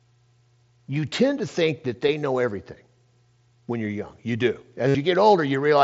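Concealed Bluetooth headset packet loss: at 2.08 s, between "tend to think that" and "know everything", a roughly 7.5 ms gap is patched almost inaudibly; from 4.88 to 4.95 s, a longer run of lost packets is filled by repeating recent waveform, giving a held buzzy tone and a slight warble on recovery.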